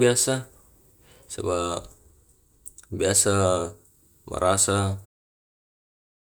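There are no technical faults in this speech clip to describe in time order.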